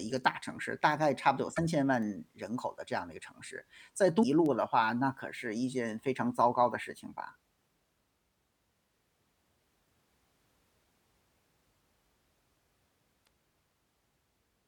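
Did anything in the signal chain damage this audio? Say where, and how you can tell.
Yes. Three short disturbances, at 1.53 to 1.59 s, 4.19 to 4.25 s and 13.23 to 13.27 s, each about 40 to 60 ms long, point to damaged data in a compressed stream at the codec or storage stage. Corrupted bytes left frames the decoder could not read correctly. It produced garbled output, lost frame sync and resumed at the next valid header.

Two isolated sharp ticks, at 2.03 s and 4.46 s, are bit error spikes from a memory or digital-link fault after decoding. Each tick has a flat, broadband character that bears no relation to the surrounding speech. The first lasts a single sample and the second two consecutive samples. In each case a flipped bit threw the sample value off by a power of two before it snapped straight back.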